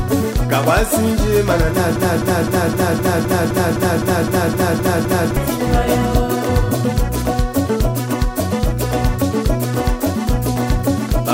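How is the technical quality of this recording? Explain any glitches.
The recording has one clear glitch. From 1.96 to 5.37 s, a 257 ms fragment repeats 13 times as a broken-record loop, most likely because the player or stream stalled and resent its last buffer.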